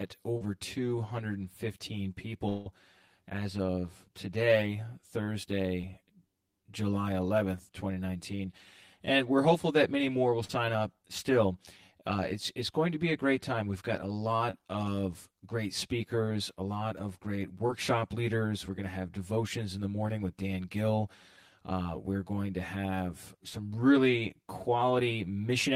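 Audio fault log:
throughout, channel delay (comb filtering): one channel runs roughly 10 ms behind the other, and when the two are folded to mono, the shared parts of the speech cancel at regularly spaced frequencies. That produces fixed notches starting near 50 Hz and repeating about every 100 Hz up the spectrum. The dense, unmoving pattern gives the whole clip a hollow, phasey tone that stays the same regardless of what is said.
0.37–0.43 s, 5.81–5.85 s, 10.45–10.51 s, 14.51–14.58 s, 17.67–17.71 s, short concealed packet loss: at each point, 20 to 40 ms of audio failed to arrive in time. The receiver patched the hole by extending the preceding sound, as a continued pitch where it was voiced or as shaped noise where it wasn't, then crossfaded back into real audio. Each patch is heard as a brief smear or wobble. At 14.51 s a few milliseconds of real audio are also dropped.
2.49–2.67 s, long network dropout: for about 170 ms the speech gives way to a synthetic continuation of the last sound. 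It fades as it goes but never falls fully silent, and the speech then picks up further along with roughly 160 ms of material absent. The likely cause is a stall in network delivery long enough that the receiver could only fill the gap by stretching what it last had.
23.49–23.60 s, burst of packet loss: a short run of about 40 ms of packets was lost together. The receiver held the last sound over the gap and turned it down as the gap went on, which gives a brief held buzz or fading hiss. Playback then resumes with the skipped section gone, and about 10 ms of surrounding audio is trimmed as it rejoins. The result is an audible jump in the speech.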